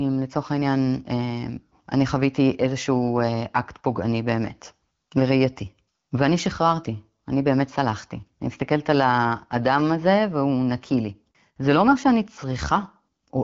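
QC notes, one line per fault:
Nothing to flag here, the speech sounds like an ordinary AMR wideband (HD Voice) call with the top end rolling off around 7.5 kHz, which fits a rate of about 12.65 kbit/s.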